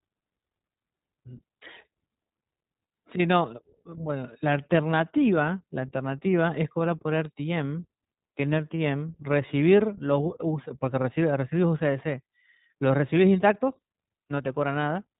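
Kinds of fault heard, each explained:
iLBC codec: narrowband speech coding in independent 20 ms frames, nothing above about 3.8 kHz, leaving plainly audible rough, synthetic texture; fits roughly 15 kbps.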